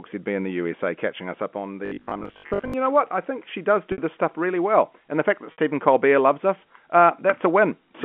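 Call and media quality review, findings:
Robotic sound from repeated short buffers, 1.86 to 2.74 s. Rigid metallic buzz at 50 Hz over the speech. Likely a playout buffer starving: the last 20 ms block is repeated while fresh audio is skipped. About half the stretch is repeats, and the repeat period forces the fixed 50 Hz tone.

Packet loss with pitch repetition at 3.92 s and 5.52 s. Each gap is 60 ms, which fits three consecutive packets dropped. Probable component: network path plus the receiver's loss concealment. The concealer repeats the last pitch period to fill each gap. It fades over roughly 50 ms, so the tail of each gap drops toward silence. Speech resumes with a short cross-fade. The gaps sit inside a G.711 A-law telephone band of 200 Hz to 3.4 kHz.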